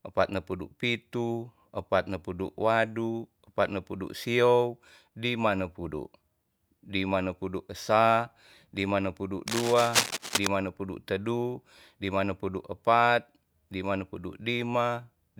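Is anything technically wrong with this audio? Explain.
Yes. From 9.48 to 10.47 s, between "nepudu esa lima nepudu" and "nepudu tedu lima nepudu", a burst of cable scratch noise sits over the speech at roughly the same loudness. It is likely caused by a worn cable or connector being moved, so its contact resistance jumps around. It sounds like scratching or rustling. On a spectrogram it shows as irregular broadband vertical streaks, and the waveform shows jagged, uneven spikes riding on the signal.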